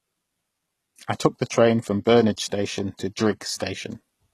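The speech here has passed through a low-bitrate codec, most likely HE-AAC at a rate that fits around 16 kbps. That codec keeps only the lower spectrum and synthesises the treble by spectral band replication, copying lower bands upward under a coarse envelope. Nothing is present above 12.4 kHz, and the regenerated upper band does not match the original harmonics, so the codec damage is plainly audible as gritty, metallic or lispy s sounds. At 2.37 s, right after "took the train from", there is a pre-echo. The transform spread its quantisation noise across a whole block, so noise sized for a sharp attack leaked about 11 ms into the quiet moment before it. The attack is preceded by a short hiss and sounds softened and smeared.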